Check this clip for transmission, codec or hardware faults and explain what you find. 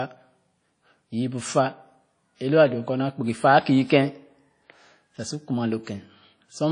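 One fault runs through the whole clip: WMA compression, audibly damaging the speech. Nothing survives above 10.1 kHz, so the top end sounds dull and closed off. The damage points to a low bitrate, which fits about 32 kbps. A transform codec like WMA codes the sound in long blocks. Its quantisation noise smears across tens of milliseconds. Weak spectral detail is dropped. The result rings and sounds washy, with hiss that swells and fades with the speech. The cause is likely WMA encoding.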